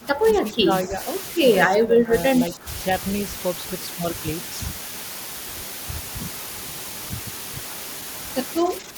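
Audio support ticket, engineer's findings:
Low bit depth with dither, whole clip. Signal path reduced to 5 bits, with dither added before rounding, so quantisation error becomes broadband random noise rather than distortion. Result: constant, even white hiss with no grit or crackle, sitting only about 5 dB below the speech. The hiss nearly matches the speech in level and stays flat through pauses and loud passages alike.

Speech suppressed in double talk, at 0.00–1.01 s, 1.67–2.13 s, 2.50–2.78 s and 8.61 s to the end. Likely cause: the echo canceller or suppressor mistaking near-end talk for loudspeaker echo and ducking it. Speech dips by about 15 dB in the first three spans and about 10 dB in the last. Affected speech totals under a second in the first span and well under that in the others.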